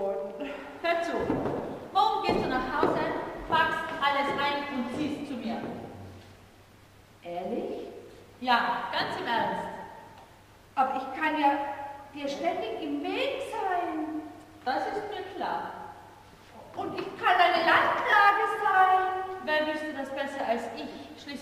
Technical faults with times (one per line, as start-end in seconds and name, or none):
18.10-18.13 lost LE Audio frames
20.92-20.96 lost LE Audio frames